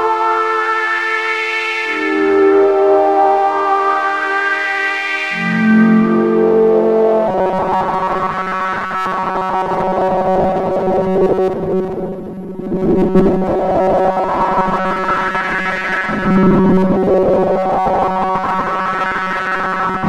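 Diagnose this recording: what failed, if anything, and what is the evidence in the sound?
From 7.28 s to the end, a rigid 188 Hz buzz runs through the sound: robotic sound from repeated short buffers, likely a starved driver buffer replaying 5.3 ms chunks.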